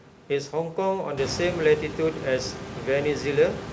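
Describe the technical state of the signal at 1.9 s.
At 1.9 s the signal is intact, with room noise sitting about 11 dB below the speech and the call codec's band ending at 8 kHz, as expected for G.722.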